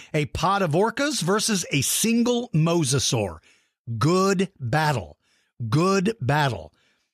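Speech, with no audible technical faults anywhere.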